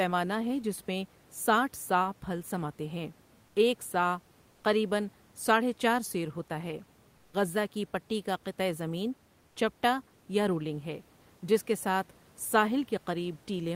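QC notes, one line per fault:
3.45–3.55 s, 4.51–4.63 s, 7.15–7.33 s and 9.47–9.55 s, comfort noise in place of the background: in each pause of 80 to 180 ms, the room noise, which sits roughly 36–39 dB below the loudest speech, gives way to a smooth, featureless hiss about 1–4 dB quieter. This is likely discontinuous transmission in an Opus-style codec. Unlike a dropout or noise gate, the pause never falls to silence.
7.31 s, onset clipped by the voice detector: speech returns with a hard edge, its first 20 ms or so missing and covered by the synthetic noise of the preceding pause. The detector was likely slow to reopen transmission. Unlike a fast fade-in, the start is cut outright.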